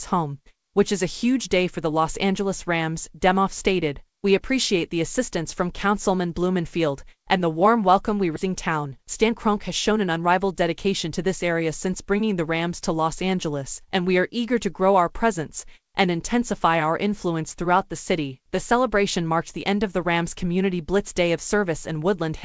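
At 8.36 s there is a skip ahead. About a second of audio is simply gone. Playback jumps straight to later sound with no gap and no fill. The two sides meet almost directly, so the sound lurches forward abruptly.

Right after, from 8.45 s to 11.09 s, there is a jitter buffer speed-up. The buffer was holding too much delay after the jump. The receiver cut out many short pitch-period slices, about a third of a second in all. The sound runs at 109% speed at the same pitch, and it sounds hurried.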